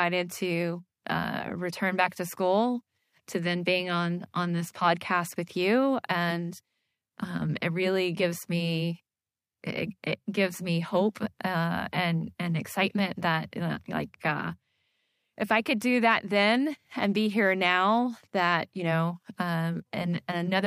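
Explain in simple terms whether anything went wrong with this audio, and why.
Listening through this speech recording, nothing stood out as having gone wrong, so there is no problem to point to or explain.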